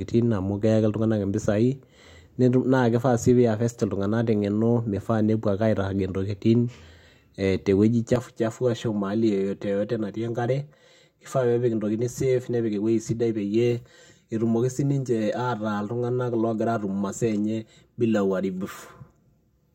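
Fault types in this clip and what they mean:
Channel delay (comb filtering), from 8.16 s after "ee te wueji" to the end: one channel lags by about 5 ms, and the mono sum cancels shared content in regularly spaced notches from around 100 Hz upward, so the speech turns hollow and phasey.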